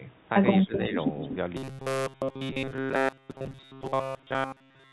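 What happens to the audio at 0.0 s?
Nothing goes wrong at 0.0 s: the audio is intact, with only the narrow, telephone-like band of a G.711 mu-law call path, nothing above 4 kHz.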